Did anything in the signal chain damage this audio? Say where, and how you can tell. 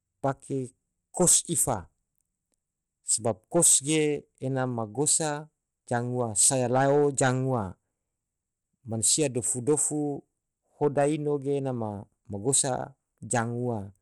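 Yes, at the codec stage, throughout the speech: nothing is present above 14.8 kHz, and a gritty, flickering treble with audible aliasing rides on everything. This is likely Bluetooth SBC compression starved of bits, which fits roughly 96 kbps, unlike a clean low-pass filter, which would leave no grit.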